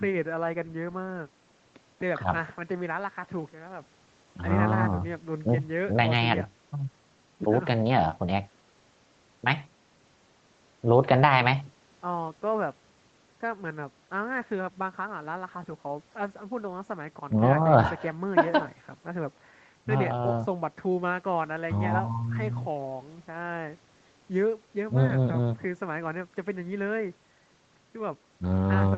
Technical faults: none

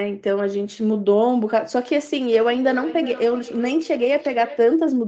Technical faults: feedback echo between two devices

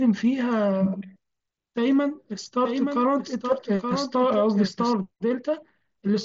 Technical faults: doubled audio track; concealed Bluetooth headset packet loss

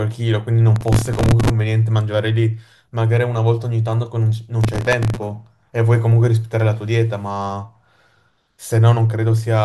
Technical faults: processor overload crackle

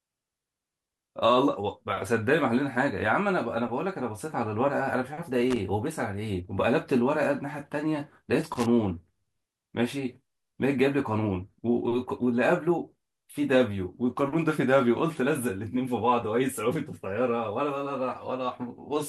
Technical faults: loose connector crackle

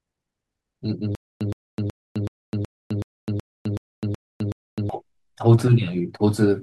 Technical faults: stutter with silent gaps

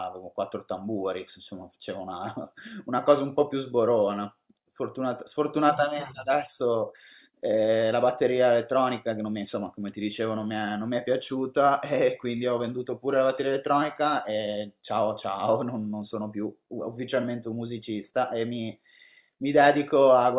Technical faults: none

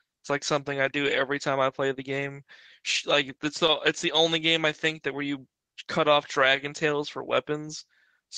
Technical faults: clock drift between sender and receiver; repeated timing corrections

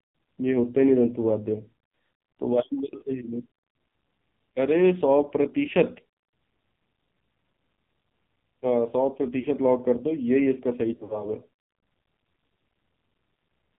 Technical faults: AMR narrowband mobile codec; lost AMR speech frames

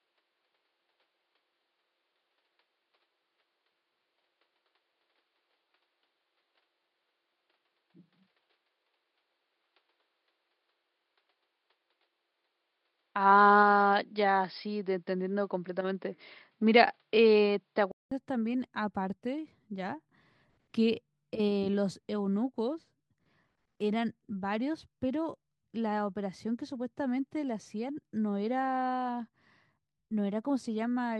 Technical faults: input switched to a poorer device

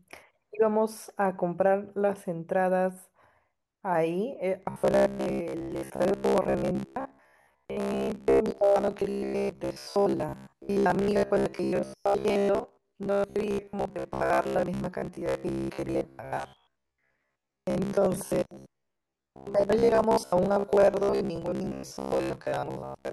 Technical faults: robotic sound from repeated short buffers

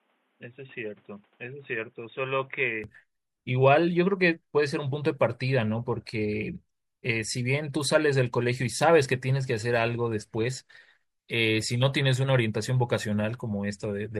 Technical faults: input switched to a poorer device

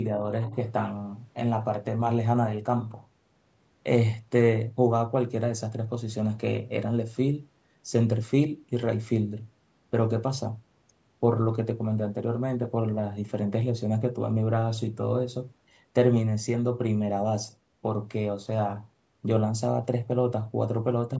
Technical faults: other side's voice leaking through

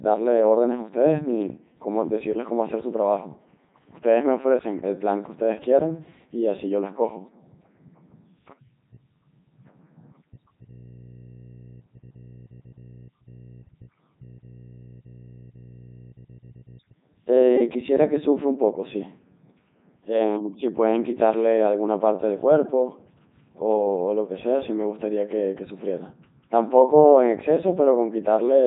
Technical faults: Codec 2 vocoder

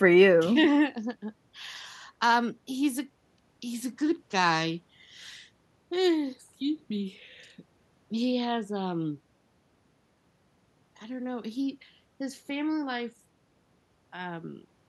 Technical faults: none

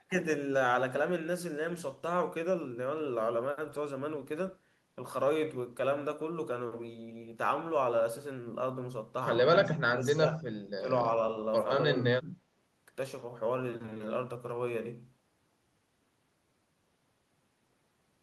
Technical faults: speech suppressed in double talk

